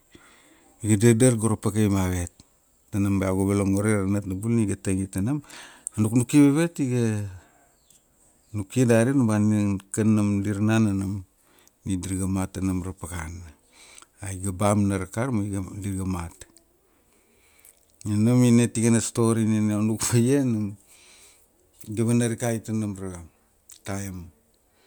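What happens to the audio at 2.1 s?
Nothing goes wrong at 2.1 s; the speech carries on intact through that moment.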